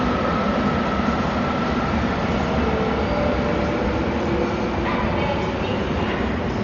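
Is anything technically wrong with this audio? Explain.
Yes. Throughout the clip the sound is dull and heavily degraded, consistent with likely Dolby Digital compression at a very low rate, which fits roughly 40 kbps. Nothing is present above 6.9 kHz, so the top octaves are simply gone. Starved of bits, the coder leaves many frequency lines without detail and the decoder refills them with noise, giving a rough, fluttering texture around tonal parts. A spectrogram would show a flat ceiling at 6.9 kHz and grainy, speckled patches between harmonics.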